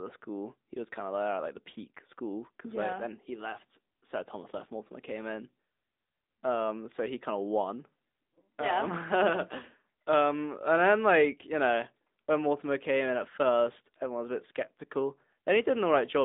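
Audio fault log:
Throughout: AMR narrowband mobile codec. The sound is confined to a phone band of 200 Hz to 3.7 kHz, with nothing above. The speech sounds plainly buzzy and synthetic. A low-bit vocal-tract model rebuilds it, which fits a mid-rate mode near 10.2 kbps.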